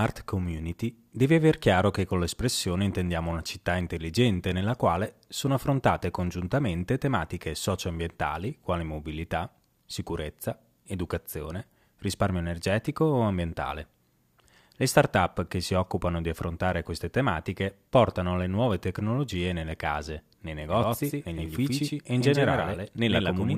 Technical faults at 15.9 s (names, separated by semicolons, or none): none